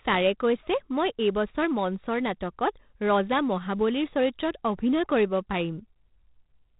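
Gritty, level-following hiss and a dull top end with nothing above 3.9 kHz run throughout: heavy 4-bit ADPCM compression, which fits a 32 kbps stream.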